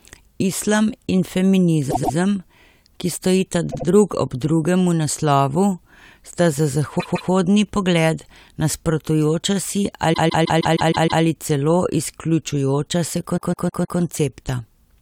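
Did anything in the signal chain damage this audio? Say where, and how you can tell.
Yes. Repeated frames at the codec or storage stage: the speech stutters at 1.90, 3.70, 6.99, 10.12 and 13.36 s, replaying blocks of 78 to 157 ms, one looping seven extra times to 11.22 s. A run of compressed frames was duplicated, lengthening the audio.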